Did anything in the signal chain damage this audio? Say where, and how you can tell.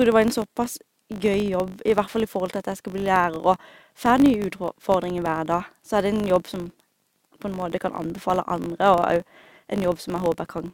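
Yes. The damage comes from a processing stage, most plausibly call processing, where a filter is restarted on every block. Throughout the speech there is a buzz at 50 Hz that rises and falls with the level of the speech, which fits 20 ms blocks. The filter loses its memory at each block boundary and starts again from silence, leaving a small transient every 20 ms. A spectrogram would show evenly spaced vertical striations and a 50 Hz harmonic comb, strongest in loud passages. The waveform would show matching periodic glitches at block edges.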